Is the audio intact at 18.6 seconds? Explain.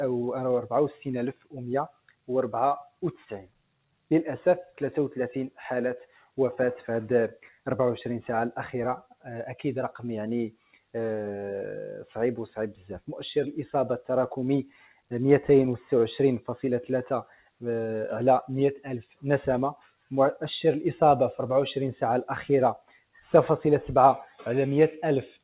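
No. At 18.6 s the audio sits inside a stretch from 17.24 s to 20.11 s where the sound is cut by the noise suppressor. The suppressor takes parts of this sound for noise and pulls them down by as much as about 18 dB, for about a second in total across the span. Sustained and decaying parts sink or end early while sharp onsets survive. On a waveform the envelope collapses after each attack; on a spectrogram the energy fades into dark holes mid-decay.

That dip sits on top of a noise suppressor applied to music or sounds, active throughout. Tuned for speech, it treats held tones and ambience as noise, so the level keeps swinging by a few dB and the sound pumps and thins. A spectrogram shows partials flickering in brightness rather than holding steady, and the waveform envelope breathes irregularly instead of following the source.

A grainy, signal-following distortion is also present at this moment, roughly 30 dB below the sound itself. 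It gets harsher as the level drops. It points to low bit depth without dither, likely 8-bit truncation. Zoomed in, the waveform shows visible stair-steps. On a spectrogram there is a hazy broadband floor that rises and falls with the sound rather than staying constant.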